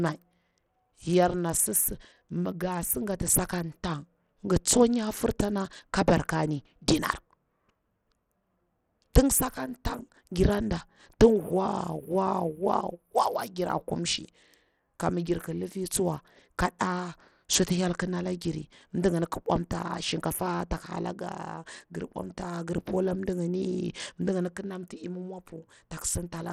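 A speech recording carrying plainly audible Bluetooth SBC compression for its whole length, likely from being sent over a Bluetooth link. The treble flickers in and out, and a gritty, aliased roughness clings to the speech. The damage is heavy enough to fit a bitrate around 80 kbps. Unlike MP3 or AAC damage, it brings no swirling warble or smooth treble roll-off. The grit sits in broad fixed bands, because this codec doesn't shape its noise to hearing.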